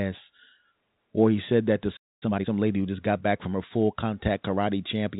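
At 1.96 s, after "he said that to", a playback stall occurs: the player likely ran dry or was blocked, and the speech cuts to silence for about 0.25 s. From 2.23 to 2.47 s, time-compressed catch-up clears the backlog by cutting and cross-fading small slices, so speech rushes at double speed, unchanged pitch, before "lady who just got".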